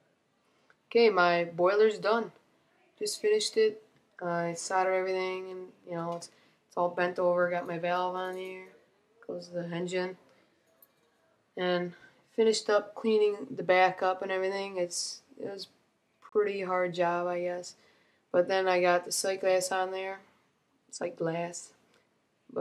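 At 16.29 s the sound drops out to silence for about 32 ms, then picks up again. This is a Bluetooth stall, likely caused by radio interference delaying packets until the headphones' buffer ran empty and playback paused for the resent data.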